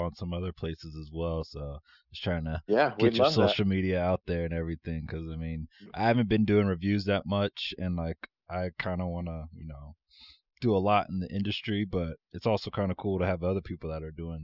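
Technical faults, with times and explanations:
No technical faults can be heard in this speech.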